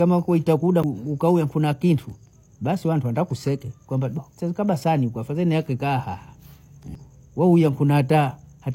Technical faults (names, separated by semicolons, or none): CD skip